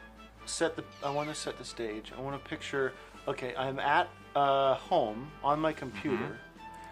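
At 0.54 to 0.57 s, a corrupt frame was concealed: the decoder caught damaged data in what sounds like a single AAC frame and covered the gap itself.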